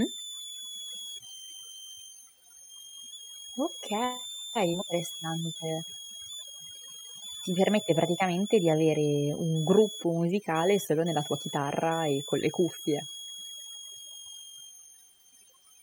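A switching power supply near the recording chain is running in an audible burst mode or beating with another one, and its switching frequency lands inside the hearing range, so a switching supply whistle sits under the speech for the full length of the clip. It is a thin, high tone, drifting between about 3.1 and 3.6 kHz as the supply's load shifts, and it is loud enough to sit not far below the speech itself.

Also running from start to finish is overdone noise removal. A noise reduction stage was set far too aggressively, so any frequency band it judges close to its noise estimate gets pushed down hard or shut off entirely, and the softer parts of the speech are treated the same way. The pauses drop to an unnatural near-silence flecked with small twinkling artefacts.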